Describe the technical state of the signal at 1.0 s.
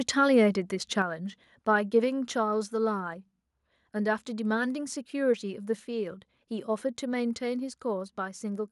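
At 1.02 s the speech and the background behind it drop together by about 5 dB in a single abrupt step, with no fade. This is a microphone volume stepped down, likely the call software lowering the device's input volume in one move.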